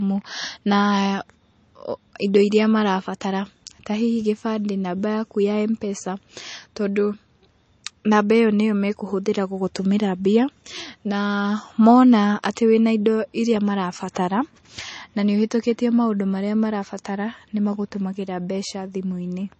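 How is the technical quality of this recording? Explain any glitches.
The quality is limited throughout the speech by one fault. For its whole length the recording shows low-bitrate audio saved at a high bitrate. Nothing is present above 8.3 kHz, which gives the speech a dull, band-limited sound. The likely cause is an earlier low-bitrate MP3 encode, consistent with roughly 32 kbit/s, that was later re-saved at a high bitrate, which cannot restore the removed content.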